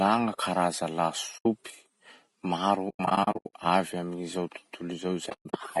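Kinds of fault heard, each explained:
Low-delay AAC compression: The whole clip carries the sound of low-delay AAC coding, likely AAC-ELD at around 32 kbps. Its short transform frames cannot separate closely spaced pitch harmonics well, so at this rate the speech comes out rough and grainy. Noise fills the gaps between harmonics and the upper band has a thin, synthetic quality. The damage is plainly audible from start to finish, not confined to any one passage.
AAC frame loss with muting: Where coded frames fail to arrive, the decoder zeroes their spectrum and the overlapping windows fade the speech out and back in, leaving soft-edged holes. A short gap of about 80 ms sits at 1.37 to 1.46 s. From 2.89 to 3.54 s, repeated dropouts are scattered over about 640 ms, with the longest run near 100 ms. A further cluster falls at 5.29 to 5.54 s, across about 240 ms.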